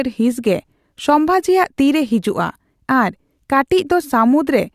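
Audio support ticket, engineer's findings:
No faults found in the speech audio; nothing to report for this ticket.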